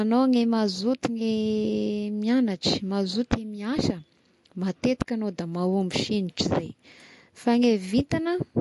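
Throughout, the speech carries plainly audible MP3 compression artefacts: nothing above about 11.3 kHz, with watery, swirling sibilants, likely from a low bitrate near 48 kbps.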